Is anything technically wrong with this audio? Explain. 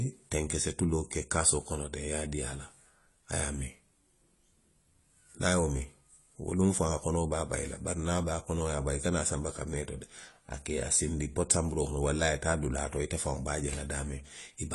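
Yes. Throughout the speech, the sound is dull and smeared, with nothing above 11.5 kHz and a warbling, fizzy edge on sibilants. This is likely AAC compression at a low bitrate, around 32 kbps. The encoder lowered its cut-off and quantised away spectral detail.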